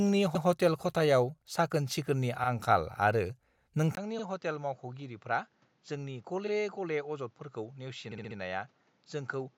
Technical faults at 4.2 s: input switched to a poorer device; repeated frames

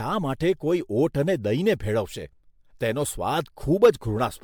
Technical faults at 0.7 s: generation loss

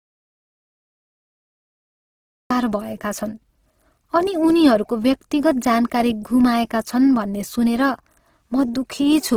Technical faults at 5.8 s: Opus compression

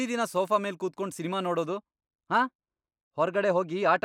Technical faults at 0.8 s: none

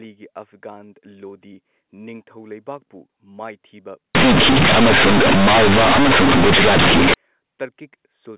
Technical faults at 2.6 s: none

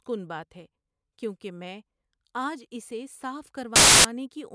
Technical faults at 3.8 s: file tags played as audio

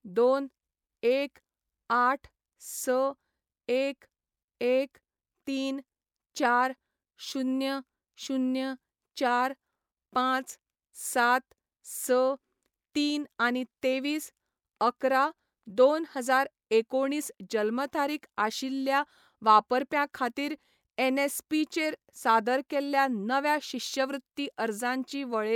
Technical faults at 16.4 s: none

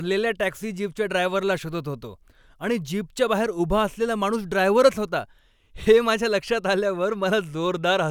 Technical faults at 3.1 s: none

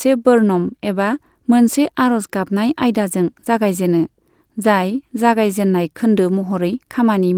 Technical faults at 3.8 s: none

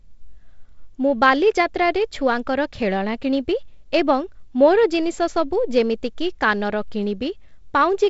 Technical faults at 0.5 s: none

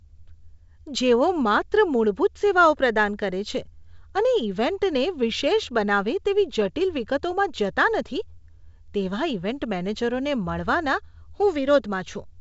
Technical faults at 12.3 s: none

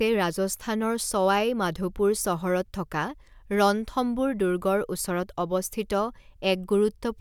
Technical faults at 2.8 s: none

